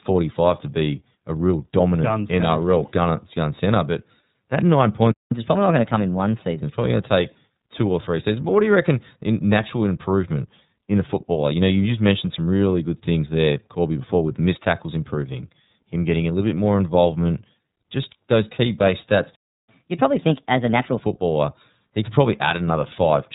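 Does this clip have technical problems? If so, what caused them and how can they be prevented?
Yes. iLBC codec damage runs through the whole speech clip: the narrowband VoIP codec codes each 30 ms frame independently at a rate that points to about 13.3 kbps, and nothing above 3.8 kHz survives. Sibilants lose their edge, the voice sounds thin and slightly rough and synthetic, and the damage is plainly audible. Using a wideband codec such as Opus at a moderate bitrate would keep the upper band and avoid the frame-by-frame graininess.

Playback stall at 5.11 s, just after "that nine", and at 19.36 s, just after "those key base stats": the output drops to silence mid-flow for about 0.20 s and then 0.33 s before resuming. This is likely the player running dry of buffered audio or its audio thread being blocked, so nothing reached the output until it recovered. A deeper jitter buffer and keeping the audio thread free of blocking work would prevent these gaps.

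Catch-up at higher speed follows each stall, from 5.31 to 6.63 s and from 19.69 to 21.01 s. The player resamples its backlog to win back the lost time, so the first stretch runs 1.15 times fast, raising pitch by roughly two semitones, and the second runs 1.25 times fast, about four semitones up, before both settle back to normal. Time-stretching without pitch change, or a gentler catch-up rate, would hide this.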